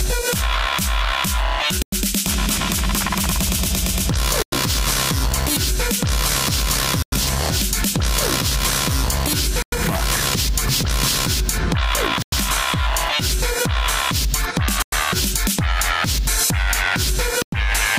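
100 ms silences cut the sound at 1.82, 4.42, 7.02, 9.62, 12.22, 14.82 and 17.42 s: a gap between chunks, left at each join of 2.5 s chunks.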